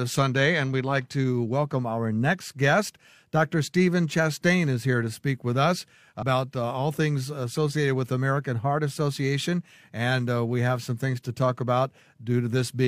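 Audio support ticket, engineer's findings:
Compressed frames skipped at 6.18 s: speech jumps ahead roughly 0.4 s, about seven 46.4 ms frames not played. Spectrogram shows abrupt content discontinuity, no gap.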